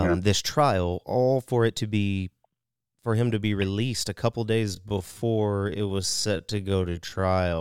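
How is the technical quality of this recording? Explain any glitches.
The recording has one clear fault toward the end. From 4.62 s to the end, a time-stretched section likely slows the speech to about 0.62 times its pace, repeating short pieces so pitch holds, leaving it dragging.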